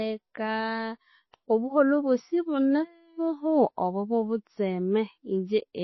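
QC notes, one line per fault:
Throughout: MP3 compression, likely cause; plainly audible coding damage at a rate fitting 24 kbps, nothing above 5.8 kHz, unlike a simple low-pass filter.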